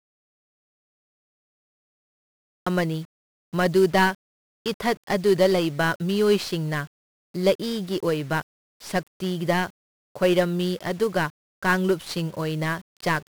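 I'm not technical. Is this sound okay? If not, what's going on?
No. Audio dropout to silence runs from the very start until 2.67 s: the recording opens already in dead, total silence, with no background at all, most likely because the input was cut off while recording carried on storing nothing. Any speech in that stretch is lost.

1-bit DFPWM compression affects the whole clip. This format keeps only one yes-or-no step per sample, nudging the level up or down, so the speech is coated in heavy fuzz and crackle, and the crisp high sounds disappear under hiss.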